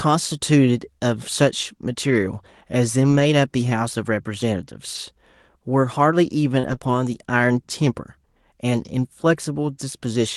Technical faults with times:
3.07-3.21 lost packet rebuilt from error correction
6.59-6.89 repeated packet loss (robotic sound)

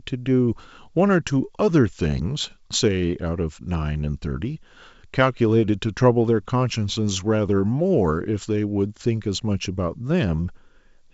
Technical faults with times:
none

